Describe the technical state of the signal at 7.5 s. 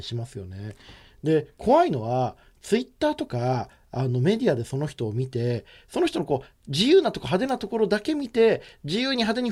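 At 7.49 s there is an electrical switching spike: a sharp snap, peaking around -25 dBFS, riding on top of the speech. It is likely a nearby switch arcing into the line, and unlike a dropout or digital glitch, the underlying sound continues uninterrupted beneath it.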